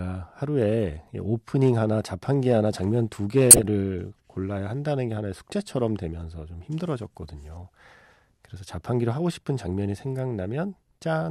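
From 3.51 to 3.64 s the speech breaks into a harsh burst of noise from a corrupt frame decoded as if it were valid. Damaged bits across a handful of consecutive frames scattered energy to the wrong frequencies. On a spectrogram it shows as a bright, smeared block; the waveform shows a spike.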